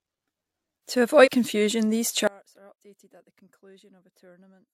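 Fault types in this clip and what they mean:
Compressed frames skipped: at 1.23 s, just before "confusion these", the speech jumps ahead by about one frame, roughly 50 ms of audio lost, consistent with 46.4 ms frames.
Audio dropout to a faint residue: from 2.27 s, after "confusion these", the speech cuts out abruptly and stays out to the end, leaving only faint sound about 30 dB below the signal. The sudden drop, unlike a fade or pause, likely points to the signal being lost while the path stayed live.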